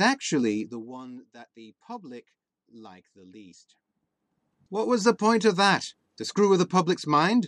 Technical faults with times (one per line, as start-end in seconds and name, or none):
0.50-0.98 zipper noise